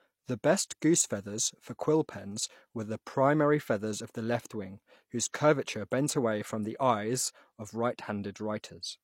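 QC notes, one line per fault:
5.32 s, pre-echo. A short hiss, about 18 ms, comes just before a sharp attack. Codec noise spread across the block fills the quiet gap, softening the onset.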